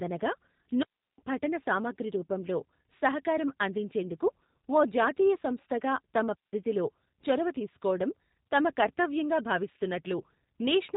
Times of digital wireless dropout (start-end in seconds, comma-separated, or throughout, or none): 0.83-1.18, 6.35-6.53